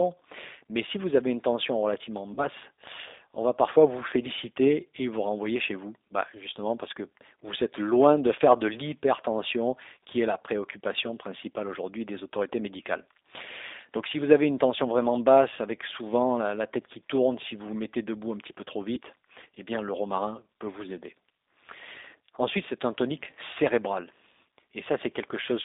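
From start to finish the speech sounds narrow, slightly rough and synthetic, with nothing below about 300 Hz or above about 3.7 kHz, and the codec damage is plainly audible. This is the G.729 codec, in its lighter G.729A form, and the sound fits an 8 kbit/s stream. It does not store the waveform. It rebuilds each 10 ms frame from a vocal tract filter, a pitch predictor and a handful of pulses, so fine detail turns grainy.

From 2.34 to 2.46 s the speech smears into a held buzzy tone or coloured noise that fades, then takes a moment to regain strength. This is VoIP packet loss concealed by the speech codec. About 40 ms of audio is missing, which points to two lost packets. The decoder repeated its last pitch and filter with falling gain, and because each frame builds on the previous one, the distortion outlasts the gap itself.

A shorter version of the same fault occurs from 18.95 to 18.98 s, where about 20 ms is missing, consistent with a single lost packet. 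The speech briefly stretches into a buzzy tone or coloured noise and dips. Again the decoder filled the gap by extrapolating from its last frame at reduced level, and the speech stays weak or distorted for tens of milliseconds or more after real packets resume.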